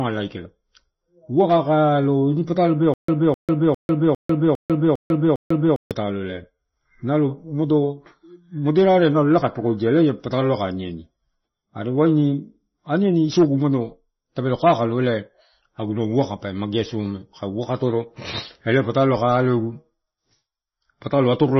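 MP3 compression runs through the whole speech clip. Nothing sounds above 5.9 kHz, and the damage is heavy and watery, which fits a very low bitrate near 24 kbps. The likely cause is an encoder starved of bits, cutting the treble and letting weak frequency lines flicker between frames.

A stutter with silent gaps runs from 2.94 to 5.91 s. A 257 ms fragment repeats seven times, each followed by 146 ms of digital silence, giving an even 403 ms cycle. This is likely a stalled stream replaying its last buffer, and the audio due in that span is lost.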